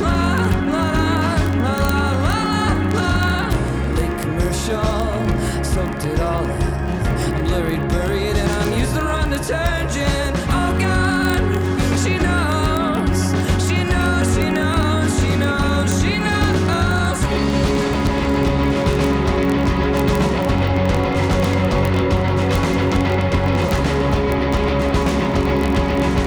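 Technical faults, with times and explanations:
0.1–26.3 s, word clock ticks: sharp ticks of uneven strength recur about every 20 ms, as an unlocked receiving clock slips one sample each time, pointing to a mismatch near 0.1 percent. Their steady rate sets them apart from random crackle.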